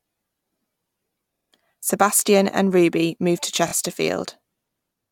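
At 1.35 to 1.49 s the speech stutters. A 46 ms block plays three extra times. These are repeated frames, resent or rewritten before decoding, adding 139 ms. After "moved to", at 3.67 to 3.72 s, a 23 ms block repeats twice more, adding 46 ms.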